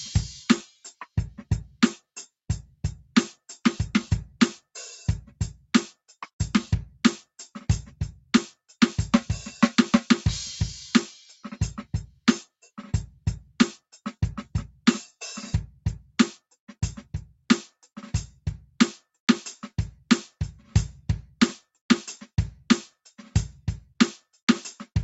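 From 0.67 to 1.06 s the music is hit by sound cut by the noise suppressor. Mistaking sustained musical tone for background noise, the suppressor pulls it down by about 9 dB at its deepest, across roughly a fifth of a second in total, so held material sinks and tails shorten while sharp onsets still pass. Unlike a dropout, the signal never vanishes, and unlike compressor pumping, the dip follows steadiness rather than loudness. Throughout, the call path leaves nothing above 8 kHz.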